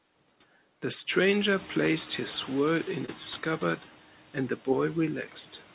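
From 1.11 to 2.87 s the background noise suddenly swells and lingers louder, then gradually sinks by about 6 dB. This is the noise suppressor catching up: the room noise jumped by about 15 dB around one second in, and the suppressor's noise estimate needed 1.76 s to adapt.

At 3.06 to 3.10 s the speech briefly smears with a wobble. That is a short concealed packet loss: 20 ms of audio missed the decoder, which filled 19 ms by extending the preceding sound before blending back into the real signal.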